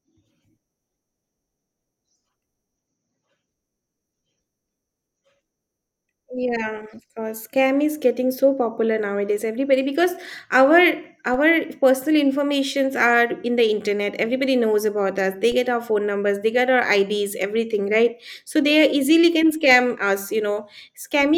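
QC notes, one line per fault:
11.34 s and 15.52 s: DC step. The zero line jumps by about -27 dBFS, heard as a low thump. A 20 Hz high-pass bleeds the offset away.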